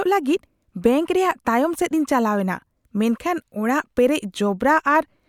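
No technical faults can be heard anywhere in the speech recording, which holds steady and continuous for its whole duration.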